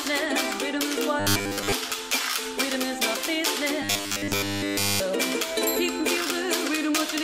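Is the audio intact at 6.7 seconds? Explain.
Yes, the audio is intact at 6.7 seconds, with no fault audible at that moment.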